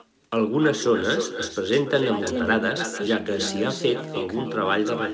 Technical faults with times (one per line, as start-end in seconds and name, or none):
0.00-5.13 echo with no canceller